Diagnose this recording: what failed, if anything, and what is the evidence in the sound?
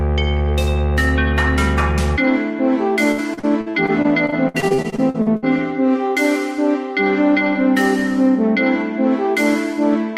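Between 3.11 and 5.44 s the sound turns choppy, with small pieces dropping out in quick succession. This is repeated packet loss at the network stage: packets kept arriving late or not at all, and the receiver papered over each hole by stretching the last sound it had. Roughly a quarter of that stretch is concealment. The longest single gap is 65 ms.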